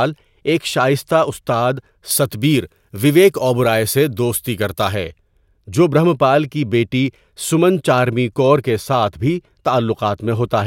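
Pre-emphasis left on from 2.11 to 4.95 s, just after "ایک شائستہ استاد": the treble boost applied before transmission was never undone, which fits the 50-microsecond FM curve. Highs sit about 11 dB above 1 kHz at 10 kHz, making the speech thin, bright and sharply sibilant.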